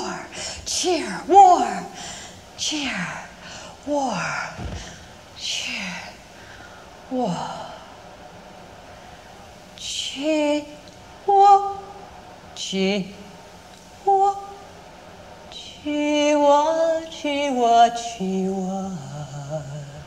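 At about 10.11 s there's a quick click, and that's a repeated buffer. Fresh audio didn't reach the device in time, so it replayed the last chunk it had, which fits a buffer of roughly 5 ms, one extra time. With a piece that short you don't get an audible stutter, just a hard join on each side that registers as a tick. Roughly 5 ms of the real audio goes missing there.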